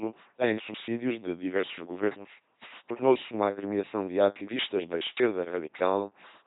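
Speech clip, heavily damaged throughout by an LPC-10 vocoder: a buzzing, mechanical robot voice built from a pulse train or noise through a short all-pole filter, every instant treated as voiced or unvoiced, with nothing above 3.9 kHz, which fits a 2.4 kbit/s stream.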